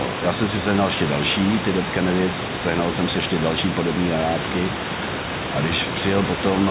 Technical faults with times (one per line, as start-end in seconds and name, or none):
none